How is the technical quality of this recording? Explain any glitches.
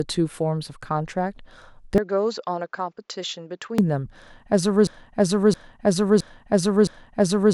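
The recording has two clear glitches: a stretch where the speech goes dull and quieter, and a stuttering repeat that runs to the end.

From 1.98 s to 3.78 s the speech turns duller and boxier, with nothing above 7.6 kHz, drops around 10 dB in level, and picks up a faint new background noise well below the speech. The change happens instantly, with no gap. The likely cause is the input switched to a poorer device, such as a second microphone or a headset in call mode, whose narrower band, lower gain and own noise replace the original's.

From 4.87 s to the end, a 0.67 s fragment of speech plays four times back to back, identical each time. This is a broken-record loop. The likely cause is a player, encoder or stream stalling and resending the last piece of audio it held instead of new material. Whatever should have been heard during those final seconds is lost and replaced by the repeats.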